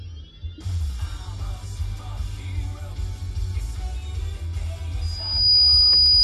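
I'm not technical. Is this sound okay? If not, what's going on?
No. From about 5.01 seconds, a microphone starts picking up the loudspeaker it is feeding, so one pitch goes round and round that loop and grows louder each time. This is loudspeaker feedback squeal. You hear a single piercing tone near 4.9 kHz that swells over roughly half a second until it is much louder than the rest of the sound, and it keeps shrieking until the clip ends at 6.23 seconds.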